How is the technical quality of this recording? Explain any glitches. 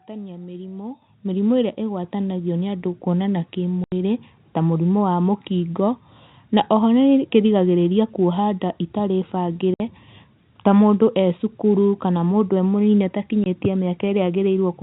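The recording has two kinds of glitch: three sudden level increases early on and three short dropouts to silence, all heard over telephone-band speech that stops at 4 kHz, as G.711 telephone coding does.

Microphone volume stepped up: at 1.02 s, 2.04 s and 3.06 s the level jumps by about 9 dB, then about 3 dB, then about 2 dB. The calling software judged the input too quiet and raised the microphone gain in discrete steps, so the speech and the background noise get louder together, abruptly.

Packet loss filled with silence: gaps at 3.84–3.92 s (80 ms), 9.74–9.80 s (60 ms) and 13.44–13.46 s (20 ms). Audio packets never arrived and the receiver inserted silence. The gap lengths are multiples of 20 ms, which points to 20 ms packets, and the edges are hard.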